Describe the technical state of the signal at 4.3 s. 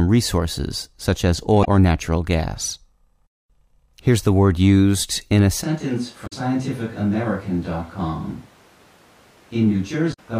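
At 4.3 s the speech signal is intact, with no audible fault at that point.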